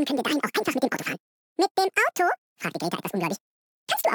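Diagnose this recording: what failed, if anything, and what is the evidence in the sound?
Throughout, everything runs twice as fast and an octave high: audio read two samples at a time (double speed), a format mismatch.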